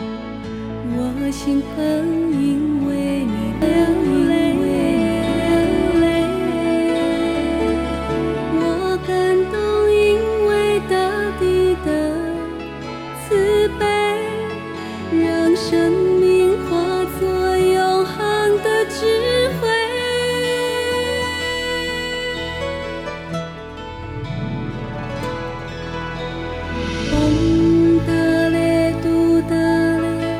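A doubled audio track runs from 3.62 to 8.78 s: a full-band copy of the sound trails about one and a half seconds behind at roughly equal level, likely a second capture path or misaligned edit, showing as repeated spectrogram patterns and stacked waveform envelopes with abrupt edges.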